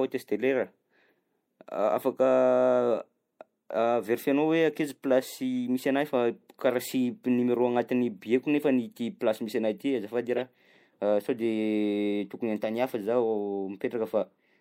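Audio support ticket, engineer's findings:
Corrupt frame decoded at 5.55–5.58 s and 10.37–10.41 s: short chirp/blip in speech, the second louder and longer. Decoder played bit-damaged frames, misplacing spectral energy. Spectrogram shows brief off-band smear; waveform shows small spike near -35 dBFS, then a larger one near -15 dBFS.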